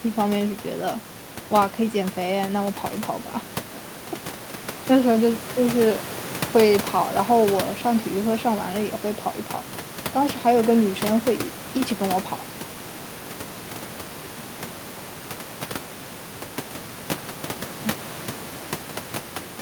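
Nothing goes wrong technically in this speech recording; the only thing under it is the room's own background noise, sitting about 16 dB below the speech, and that belongs to the space where the microphone was.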